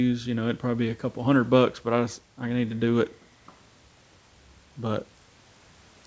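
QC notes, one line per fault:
The speech carries the sound of a call's microphone processing and G.722 wideband telephone coding, with nothing above 8 kHz and the upper band's faint coding texture consistent with the codec's top 64 kbit/s mode.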